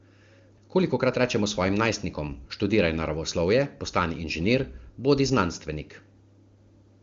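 This speech recording shows no technical faults, and its content stops at about 7.1 kHz with clear, smooth detail below that, which fits AMR wideband (HD Voice) coding at or near its highest rate.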